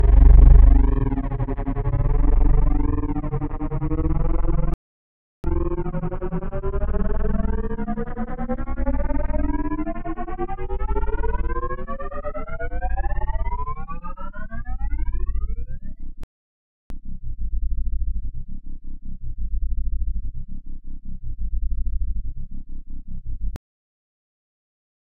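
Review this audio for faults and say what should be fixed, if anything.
Playback stall, 4.74–5.44 s and 16.24–16.90 s: sound falls silent for about 0.7 s each time, likely a starved or blocked player, far longer than a momentary dropout. Give the player a deeper buffer and keep blocking work off its audio thread.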